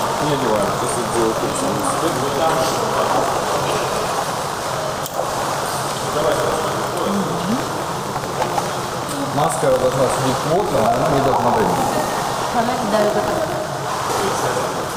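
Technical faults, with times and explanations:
Throughout, buffer tearing: a robotic buzz at 50 Hz runs under the sound because the writer and reader of the playback ring buffer have drifted into each other, so every period holds a small sliver, roughly 3 percent, of audio from one lap earlier, around 70 ms old, with a hard splice at each edge. The 50 Hz rate points to a period of about 20 ms. Unlike mains hum at the same frequency, the buzz vanishes whenever the sound stops.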